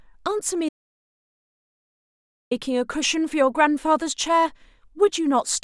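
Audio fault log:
0.69–2.51 s, audio dropout to silence: The speech cuts off mid-flow and returns 1.82 s later. The gap is dead silence with no room tone at all. The input was likely lost or muted while the recorder kept writing silence, so that stretch is gone.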